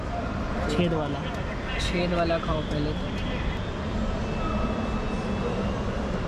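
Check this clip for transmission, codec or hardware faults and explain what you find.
No faults audible anywhere in the clip; nothing to report.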